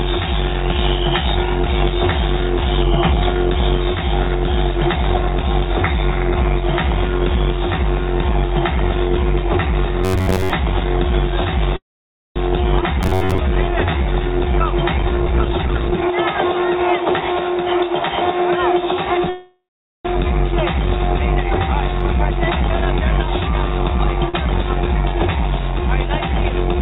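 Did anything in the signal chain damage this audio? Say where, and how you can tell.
Yes. The damage comes from the network and jitter-buffer stages of a call path, not from the analogue side or the converters.

Robotic sound from repeated short buffers: new audio likely arrived too seldom, so the receiver kept looping a short buffer of about 10.7 ms. This replaces most of the audio with a rigid, metallic buzz at 93.8 Hz from 10.05 to 10.52 s and again from 13.03 to 13.38 s.

Call audio freeze: packets were likely held up in the network and the jitter buffer ran dry. From 11.76 to 12.38 s the last sound is stretched for about 0.6 s, with roughly 550 ms of near-silence. From 19.29 to 20.07 s it is stretched for about 0.75 s, with roughly 470 ms of near-silence. Playback then resumes where it stopped, so a gap is inserted and nothing is lost.

Skip ahead: at 12.82 s a stretch of roughly 150 ms was dropped while later packets were already queued. 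Only about 8 ms of fill bridges the jump, so the sound on either side is spliced almost directly together.

Jitter buffer slow-down: the buffer was low, so the receiver repeated single pitch periods and small pieces of pauses to rebuild its reserve. From 12.87 to 14.40 s this adds 149 ms, and the audio plays at 91% speed with its pitch unchanged and its sounds drawn out.

Jitter buffer speed-up: the buffer held too much audio, so the receiver trimmed pitch-period-sized pieces to cut the delay. From 15.00 to 17.58 s it removes roughly half a second and plays at 122% speed, which sounds clearly hurried. From 21.99 to 24.22 s it plays at 105% speed, with about 100 ms removed.

Short stall from a late packet: at 24.29 to 24.36 s one packet missed its playout time. The receiver held the last sound for 46 ms until the packet arrived, then continued from the same point, so a sound hangs briefly with nothing missing.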